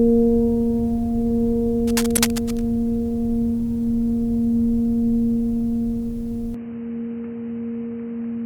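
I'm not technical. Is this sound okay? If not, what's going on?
No, there are three problems in this music clip.

From 1.87 to 2.63 s there's a scratchy, rustling noise over the music, quite noticeable. That's cable scratch noise, likely from a worn cable or connector being wiggled so the electrical contact flickers on and off.

Right in the middle of that, from 2.13 to 2.19 s, there's a quick glitchy blip. That's damaged data in a compressed stream: a bit of the file got corrupted and the player stumbled over it.

From 6.54 s to the end, the music suddenly turns dull and boxy, with nothing above about 3 kHz, plus a faint new hiss. The volume stays the same and there's no gap. That points to the input being switched to a poorer device, likely a lower-quality microphone or headset taking over.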